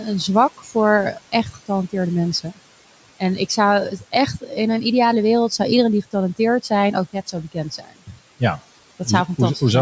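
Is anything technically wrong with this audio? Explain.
Yes, there are two related problems, both from the noise suppressor.

Throughout the clip there are noise suppressor artifacts. The room noise sits about 19 dB below the speech, and the suppressor pulls it down by about 18 dB frame by frame. You hear the background dip between phrases and swell under the speech.

In four spots, the noise suppressor cut the speech itself: 0.57 to 0.76 s (about 14 dB down), 1.13 to 1.7 s (about 17 dB), 3.91 to 4.14 s (about 9 dB), and 7.52 to 8.14 s (about 19 dB). The suppressor mistook quieter parts of the speech for noise and turned them down with the background. Each dip lasts a fraction of a second, so the affected speech sounds swallowed. The call microphone processing with its top end around 8 kHz isn't a fault.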